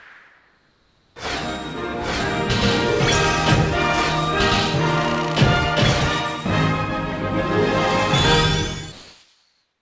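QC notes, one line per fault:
0.00–1.16 s and 8.92–9.81 s, comfort noise in place of the background: in these quiet stretches the sender likely stopped transmitting, and the receiver filled them with synthetic noise. The real background, already about 40 dB below the loud passages, becomes a steady, featureless hiss at roughly the same level.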